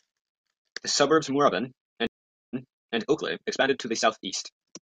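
Speech that suddenly rushes ahead from 1.13 s to the end, moving about 1.61 times faster, hurried, while its pitch stays put. This is likely a time-stretched section, where software squeezed the audio to a shorter length by dropping short pieces so the pitch would not rise. At 2.07 s the sound cuts out for 460 ms, then comes back about 0.46 s earlier than where it stopped, replaying a stretch before carrying on until about 2.99 s. That is a stream reconnect: the connection dropped, the player went quiet, and a fresh decoder started mid-stream on a resent burst of audio.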